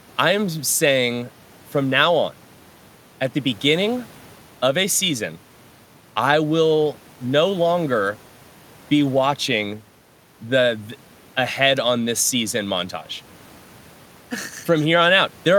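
No technical fault can be heard anywhere in the recording. There are no events to place in time.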